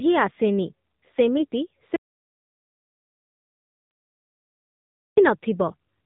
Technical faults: AMR narrowband mobile codec; audio dropout to silence; AMR bit errors

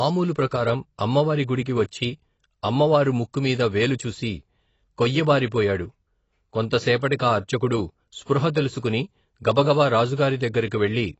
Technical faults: AAC compression

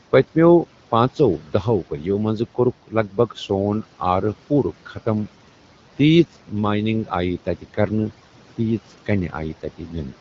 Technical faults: speech cut by the noise suppressor

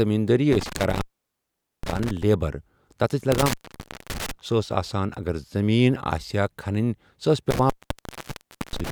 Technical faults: intermittent contact

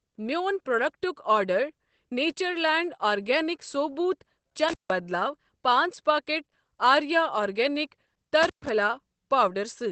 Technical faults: Opus voice compression; intermittent contact

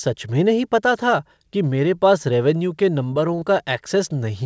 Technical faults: short concealed packet loss; short stall from a late packet

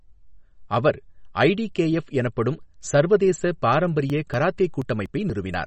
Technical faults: MP3 compression; periodic USB or driver dropouts

